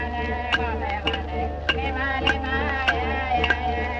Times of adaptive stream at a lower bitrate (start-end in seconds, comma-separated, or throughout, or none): none